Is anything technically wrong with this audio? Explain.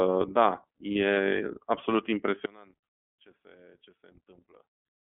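Yes. The speech carries three technical faults.

From start to finish the speech passes through the iLBC codec. Its band runs only from about 250 Hz to 3.4 kHz, which fits the 13.33 kbps mode with 30 ms frames. Each frame's excitation is coded independently, so the speech sounds plainly rough and synthetic. A spectrogram shows a hard ceiling near 3.4 kHz and an empty band below 250 Hz.

From 0.93 to 0.96 s there are lost iLBC frames. The 30 ms gap fits a single lost frame. The decoder fills it by repeating the last pitch cycle with added noise, so it is heard as a brief held, buzzy vowel. On a spectrogram this shows as a short stretch of flat, repeated harmonics. The next frame decodes cleanly at once.

From 2.46 s to the end the level drops by about 27 dB, leaving only a faint residue of the speech. The likely cause is one channel inverted in polarity, so the shared centre content cancels when the channels are summed to mono. 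The waveform collapses to a much smaller envelope, and a spectrogram shows the energy fading sharply.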